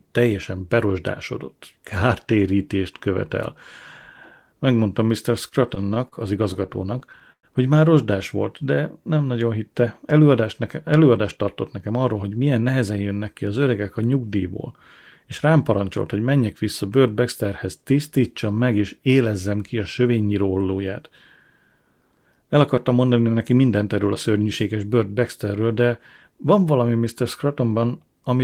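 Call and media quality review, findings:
Repeated stalls (stutter), 5.48–6.15 s: audio drags and catches four times, about 96 ms held in total, longest gap 38 ms. Jitter buffer ran dry as packets arrived late or too slowly. Receiver extended the last sound each time; nothing lost.
Repeated stalls (stutter), 6.54–7.46 s: eight catches, 174 ms filled, one 107 ms gap long enough to fade the held sound. Same buffer underrun cycle, no audio missing.

Jitter buffer slow-down, 8.62–9.19 s: delivery runs at 90% speed, pitch unchanged, sounds drawn out. Buffer low or target delay raised, so the receiver repeated single pitch periods or slices of pauses to add about 65 ms.
Jitter buffer slow-down, 17.46–18.20 s: 95% speed, 49 ms added by the same repetition. Stretched delivery, pitch steady.

Jitter buffer speed-up, 11.22–12.91 s: hurried delivery at 109%, pitch intact. Buffer over target, so the receiver cut one or a few pitch periods at a time, roughly 150 ms.
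Jitter buffer speed-up, 20.17–20.44 s: 115%, about 50 ms cut. Rushed.
Jitter buffer speed-up, 23.61–23.97 s: 110%, about 50 ms cut.

Single sharp click at 13.47 s, a thin vertical line on the spectrogram. Likely dropped samples: only a few samples gone, so the waveform jumps straight to a later value. Too brief to remove any audible sound.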